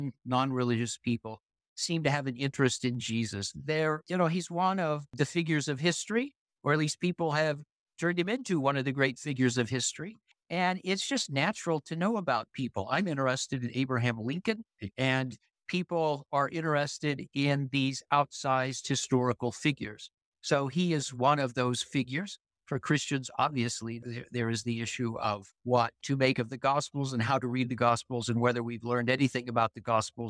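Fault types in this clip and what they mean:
No technical faults can be heard anywhere in this audio. There is nothing to list for it.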